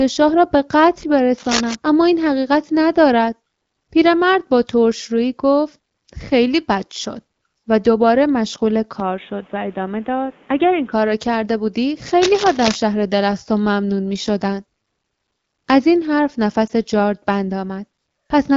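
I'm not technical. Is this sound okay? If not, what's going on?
No. There are three kinds of problem.

Cable scratch noise occurs at 1.38 to 1.75 s and again at 12.22 to 12.76 s. Each time a rough, rustling scratch sits loudly over the speech for a fraction of a second. It is likely a worn cable or plug being moved, so the connection flickers. Unlike steady hiss or hum, it comes in uneven bursts and stops as soon as the movement stops.

The input switched to a poorer device from 9.00 to 10.92 s. The speech suddenly turns dull and boxy, a little quieter, with a faint new background noise, and nothing comes through above about 3.8 kHz. Then it clears up again. The likely cause is the recording jumping to a lesser microphone or headset. The change is instant with no gap, and the whole tone changes, not just a crackle.

Lost AMR speech frames occur at 16.67 to 16.71 s. One 20-millisecond piece of the phone signal went missing, and the phone filled the gap by repeating the last sound, more quietly. 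You hear a tiny dip or warble. It is too short to be a dropout or silence, and unlike scratching it adds no noise. It only briefly smears the speech.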